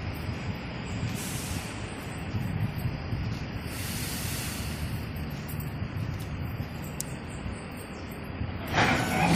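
No technical faults are audible.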